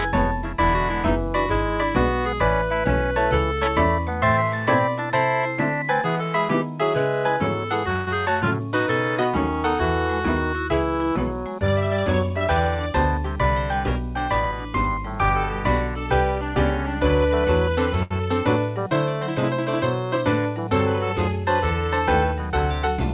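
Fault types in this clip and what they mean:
Call audio freeze: At 7.96 s the sound turns into a fading buzz or hiss for about 108 ms, then picks up right where it left off with nothing lost. That's likely packets held up in transit, leaving the jitter buffer empty and the receiver filling the gap.
Short stall from a late packet: Around 18.03 s the last sound gets drawn out for roughly 77 ms with a slight buzz or dip before things carry on from the same spot. A packet arrived late, so the receiver stretched what it had until the packet came in.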